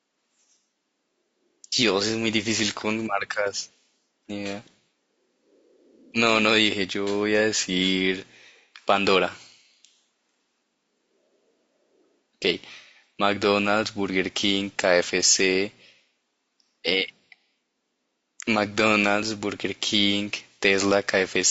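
Throughout, the speech sounds rough and grainy, with noise between harmonics, likely low-delay AAC compression: short frames resolve pitch poorly, consistent with around 32 kbps.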